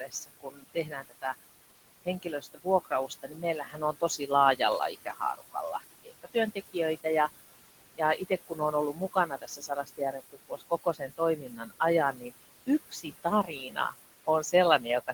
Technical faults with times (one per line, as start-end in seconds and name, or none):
0.00-15.14 noise suppressor artifacts
0.00-1.24 speech cut by the noise suppressor
2.05-4.60 speech cut by the noise suppressor
4.92-7.05 speech cut by the noise suppressor
7.96-11.81 speech cut by the noise suppressor
12.13-12.31 speech cut by the noise suppressor
12.66-13.94 speech cut by the noise suppressor
14.27-15.14 speech cut by the noise suppressor